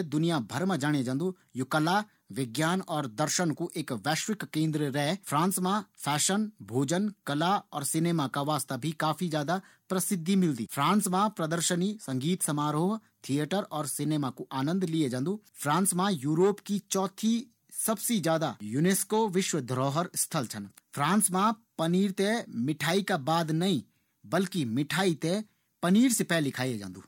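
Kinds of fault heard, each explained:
No technical faults heard.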